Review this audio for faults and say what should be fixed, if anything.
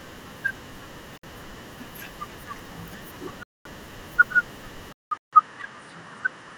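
The speech drops to dead silence at 1.18–1.23 s, 3.43–3.65 s and 5.17–5.33 s, then resumes. This is likely a Bluetooth stall: interference delayed packets until the headphone buffer ran dry. The waveform shows flat gaps, and the spectrogram shows blank full-height columns. Keep the phone close and clear of crowded 2.4 GHz traffic.

From 4.93 s onward, after a 0.19 s silence, the speech turns duller, likely because the input switched to a poorer device. The spectrogram shows nothing above 10.1 kHz and a new noise floor about 50 dB down, while waveform level stays unchanged. Lock the recording input before starting.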